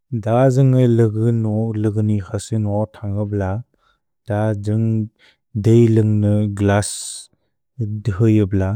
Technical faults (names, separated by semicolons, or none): none